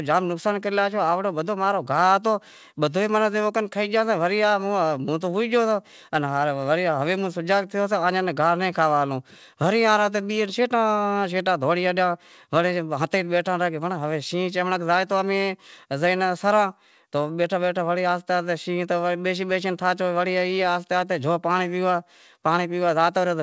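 No technical faults can be heard anywhere in this speech clip. It has passed through a call connection whose band stops at about 8 kHz, which fits a wideband codec such as G.722, and that top-end limit is the normal character of such a link.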